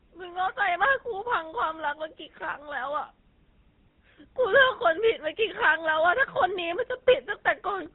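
Throughout, the speech carries the buzzy, gravelly roughness of the GSM full-rate codec, with nothing above 4 kHz, consistent with roughly 13 kbps. Unlike plain band-limiting, the excitation itself sounds coarse. From 3.92 to 3.97 s, lost GSM frames cover about 40 ms. The last good frame is repeated, giving a brief metallic ring rather than a silent gap or click.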